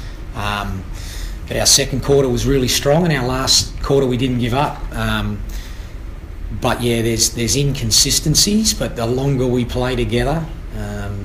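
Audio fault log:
1.62 to 2.21 s, 2.56 to 2.99 s, 3.50 to 4.65 s and 7.94 to 8.70 s: hard clipping. Each of these stretches is pushed past what the stage can pass, about 7, 4, 4 and 6 dB over respectively, so the peaks get sliced flat. Those squared-off tops throw harmonics way up the spectrum, which is why the loud parts sound harsh, roughest in the first and last bursts where the overload is heaviest.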